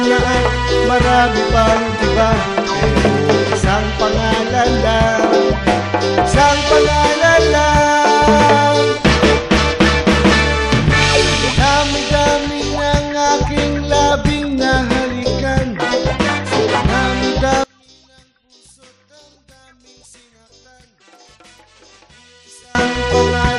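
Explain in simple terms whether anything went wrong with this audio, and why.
Yes. From 17.64 to 22.75 seconds the sound nearly disappears, leaving only a faint trace. The likely cause is one channel inverted. One stereo side is flipped upside down, so when both sides are combined, they cancel each other out.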